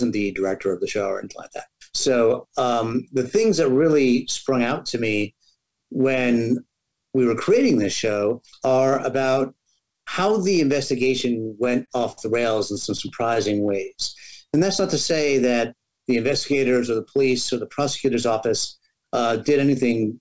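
From 11.42 to 12.19 s and again from 12.75 to 13.93 s you get repeated stalls (stutter): the jitter buffer kept running dry, so the receiver stretched the last sound. It drags and hiccups, with gaps up to 51 ms early on and ten shorter ones later. Then at 16.75 to 17.27 s there's a jitter buffer speed-up, where it trimmed a few tens of milliseconds of pitch periods to cut delay, so the sound runs about 6% fast at the same pitch. Through all of it the call path tops out at 8 kHz, which fits a wideband G.722 setup.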